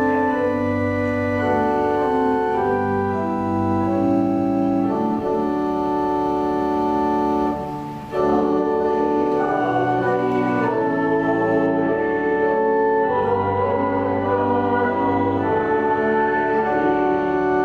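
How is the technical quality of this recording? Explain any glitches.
The recording has one fault, and it affects only the last part. From 11.66 s to the end, de-emphasis is applied wrongly: a treble-cut filter meant to reverse pre-emphasis acts on audio that never had that boost, or is applied a second time. The result is a smooth high-frequency roll-off, about 8 dB down at 10 kHz relative to 1 kHz, so the sound turns dull and muffled.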